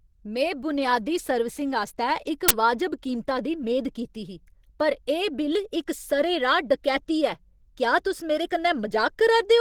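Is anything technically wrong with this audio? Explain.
Yes. There are two faults: a codec problem that runs through the whole recording and one brief burst.

Throughout the speech, the sound is hoarse and grainy, with a rough, noisy edge on voiced parts. The likely cause is Opus compression at a low bitrate, roughly what 16 kbps would give. At that rate Opus runs in its hybrid mode, coding the lower band as speech and the upper band more coarsely. The full bandwidth is kept, but the damage is plainly audible.

From 2.49 to 2.51 s, between "बुनयादी सर्विसिंग आस्तै इक" and "वाजब कीमता दी मेद", a short, loud blast of digital noise cuts in. This is an uninitialised buffer. A block of memory was played before any audio had been written to it, so leftover values came out as samples. The burst lasts about 23 ms, which fits a 1024-sample buffer. It is harsh and unrelated to the speech around it.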